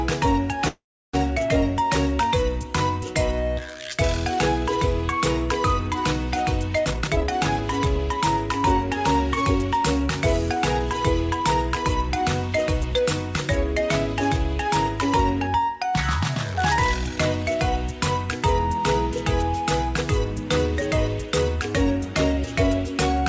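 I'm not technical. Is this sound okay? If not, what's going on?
No, there are two problems. From 0.68 to 1.15 s there is a call audio freeze: the sound stalls and trails off into about a third of a second of silence, then resumes where it left off. This was likely caused by delayed network packets starving the receiver's buffer.

Then there are three spells of jitter buffer speed-up, where the receiver trims tiny slices to cut the built-up delay. The sound runs fast but keeps its pitch: about 23% fast from 6.85 to 8.18 s, 6% from 9.42 to 10.56 s, and 2% from 11.41 to 13.00 s. The first spell is the most noticeably hurried. Throughout, the call codec path leaves nothing above 8 kHz.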